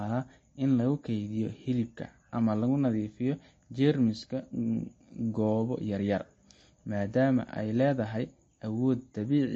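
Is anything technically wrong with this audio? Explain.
Yes. Throughout the speech, the sound is dull and watery, with nothing above about 8.3 kHz, and s sounds carry a swirly, metallic chirp. This is likely MP3 compression, with damage plain enough to suggest a low bitrate of around 32 kbps. Short of bits, the encoder cuts off the treble at a fixed frequency and drops weak frequency lines, which then flicker on and off from frame to frame, producing the warble and smearing consonant attacks.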